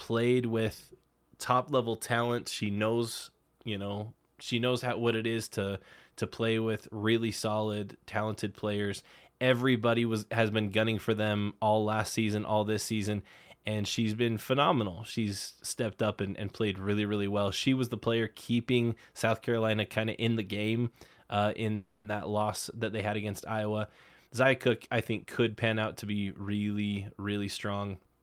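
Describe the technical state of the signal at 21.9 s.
At 21.9 s the signal is inside a call audio freeze running from 21.75 to 22.06 s. The speech stops and the last sound is stretched into a buzzy, fading tone for about 290 ms, likely because delayed packets left the jitter buffer empty. Speech then resumes exactly where it stopped, with nothing lost but everything after it pushed about 290 ms later. On a spectrogram, frozen horizontal bands fade out; the waveform shows a repeating, decaying pattern.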